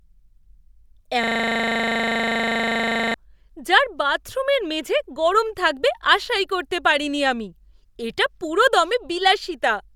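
At 1.24 s the speech locks into a system hang loop that runs until 3.14 s. The playback side froze, but the sound hardware kept reading the same stretch of its ring buffer, so a 40 ms slice of audio repeats exactly, 48 times. At 25 repeats a second it lands as a rough, rattling stutter with a buzzy edge, which fits a buffer of about that length.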